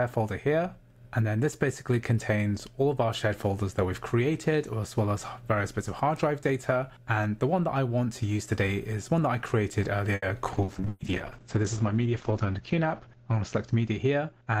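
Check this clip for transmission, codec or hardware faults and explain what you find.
Five network and codec faults cluster in the second half, from about 10.2 s to the end.

At 10.15 to 10.25 s there is a short stall from a late packet. The jitter buffer ran dry, so the receiver held the current sound for 70 ms until the packet arrived. It sounds like a briefly frozen sound with a slight buzz or dip. Unlike a loss, nothing is skipped; playback just runs 70 ms later.

From 10.54 s to the end there is a call bitrate drop. The encoder's rate fell from 64 to 8 kbps, and the audio bandwidth narrowed from 20 kHz to 8 kHz, staying at its lowest for about 2.1 s. The sound turns muffled and rough. Because it is sustained rather than momentary, it is distinct from the concealment glitches inside it.

At 10.64 to 10.81 s there is a short concealed packet loss. About 60 ms of audio never arrived. 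The receiver bridged the gap with 40 ms of extrapolated sound, then blended back in. The result is a brief smear or wobble with a small jump forward, unlike the stall, which holds without skipping.

At 10.88 to 11.03 s there is a burst of packet loss. A run of 120 ms was lost, and the receiver extended the last sound across it while fading it down. You hear a held buzz or hiss that fades before the audio resumes further on. It is longer and more audibly fading than the earlier concealment.

At 14.10 to 14.59 s there is a jitter buffer speed-up. To shrink the accumulated delay, the receiver cut out pitch-period-sized slices, roughly 70 ms in total. The sound plays at about 112 % speed with unchanged pitch, which is what separates it from a simple resampling error.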